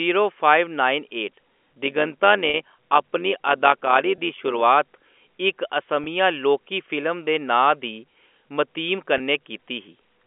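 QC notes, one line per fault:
1.85–4.63 s, overlap-add ripple: the level swells and dips by about 6 dB around 100 times a second because the frames were rejoined with an overlap that doesn't sum to a constant gain, giving a metallic buzz with extra tones around each note. The waveform envelope shows regular scalloping, and the spectrogram shows evenly spaced vertical banding.
2.50 s (40 ms), 4.16 s, 6.04 s and 9.18 s (20 ms each), packet loss with pitch repetition: each gap is bridged by repeating the last pitch period, heard as a brief, buzzy held tone. The longer first gap fits two lost packets. The spectrogram shows frozen, flat harmonic stripes, and the waveform shows identical repeated cycles.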